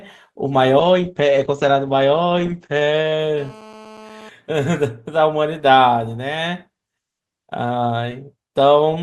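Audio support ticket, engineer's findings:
Call bitrate drop, 0.82–3.25 s. Bandwidth estimate collapsed; encoder forced from 32 kbps to 11 kbps, held at the floor for about 2.3 s. Coarser coding plus bandwidth cut from 20 kHz to 8 kHz: speech goes muffled and rough until rate recovers.

GSM phone buzz, 3.38–4.29 s. Nearby 2G handset's TDMA bursts at 217 Hz rectified in the audio path. Hard, raspy 217 Hz buzz with dense harmonics, about 22 dB below signal, steady throughout, which fits a handset on an active call.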